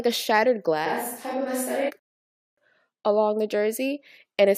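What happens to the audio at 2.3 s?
At 2.3 s you're in the middle of a rebuffering stall. From about 1.99 s to 2.58 s the speech just drops into dead silence, then picks up again at "along the" exactly where it left off. What's happening is the player ran dry of downloaded audio and sat waiting for more to arrive. Nothing gets skipped, but roughly 0.58 s of extra time is inserted into the clip.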